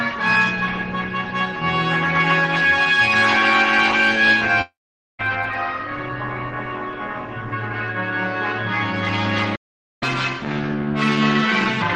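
At 4.61 s the audio cuts out until 5.21 s, and that sounds like a long network dropout. The last sound gets smeared into a buzzy tail that fades, then there's about 0.47 s of near-silence before things pick up again. When it returns, roughly 0.58 s of material is just gone. The likely cause is that no packets arrived for that stretch, so the receiver filled what it could and gave up on the rest.

Then at 9.55 s everything stops dead mid-flow for about 0.46 s, back at 10.03 s. That's a playback stall. Unlike the earlier gap, nothing fades or buzzes here. It simply goes quiet and then carries on. The player most likely ran out of data or had its thread blocked, and output froze until it recovered.

Right after, from 10.03 s to 11.82 s, you get catch-up at higher speed. Everything runs at 1.25× and the pitch jumps up by about four semitones, so it sounds a bit chipmunky and rushed. The player is resampling its backlog faster to win back the time lost in the stall. 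Once it's caught up at 11.82 s, speed and pitch drop back to normal.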